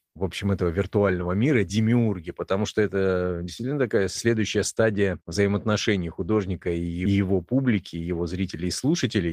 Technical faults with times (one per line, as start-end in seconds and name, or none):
1.07-1.21 lost packet rebuilt from error correction